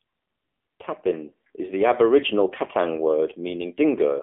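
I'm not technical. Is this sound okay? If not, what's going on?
No. The AMR narrowband mobile codec affects the whole clip: this speech passed through old-style phone compression that drops everything above about 3.5 kHz and rebuilds the voice from a simple model, making it thin, muffled and noticeably buzzy.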